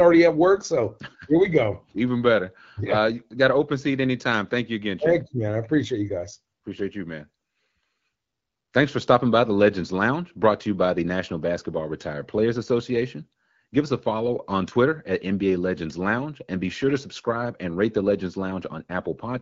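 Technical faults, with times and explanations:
Nothing here counts as a technical fault; the speech is carried over an AMR wideband (HD Voice) link at 12.65 kbit/s, a rate where the codec leaves only light traces.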